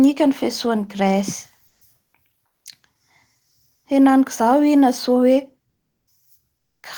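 From 1.67 to 1.81 s and 2.03 to 2.13 s, comfort noise replaces the background, a steady featureless hiss about 9 dB then 2 dB quieter, likely from discontinuous transmission.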